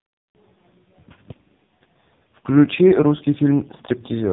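The speech carries heavy AMR narrowband mobile codec damage throughout. Nothing passes above 3.8 kHz. The voice is buzzy and synthetic, fitting a bitrate near 5 kbps.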